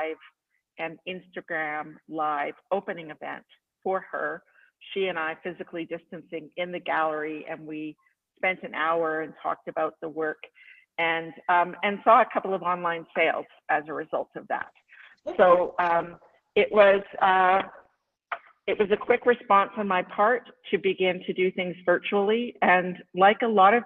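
At 14.64 s there's a call bitrate drop that lasts to the end: the encoder gets starved, which fits a fall from around 48 kbps to about 8 kbps. The top end collapses from 20 kHz to 6 kHz, and for roughly 4.7 s it sits at that lowest rate; it sounds muffled, rough and watery.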